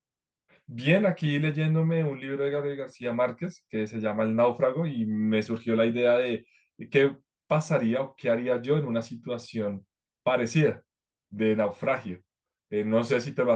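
Nothing in the speech stood out as a fault on listening.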